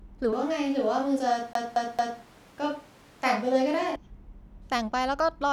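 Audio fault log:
0.33–3.96 s, switch to a distant microphone: The speech turns roomy and hollow at once, with the low end thinned out and reverberant tail added, then snaps back just as abruptly at the end of the span. The level stays about the same, but a room noise floor appears, sitting around 30 dB below the speech. This is likely a failed or missing close-mic feed, with the recording falling back to a more distant pickup that hears more room than talker.
1.53–2.21 s, CD stuck on one turn: The same 225 ms stretch of speech plays three times in a row, each pass cut off by a brief mute as the audio jumps back to the start of the segment. The result is the fast, evenly spaced stutter of a skipping disc, where playback returns to the same point on each turn instead of advancing.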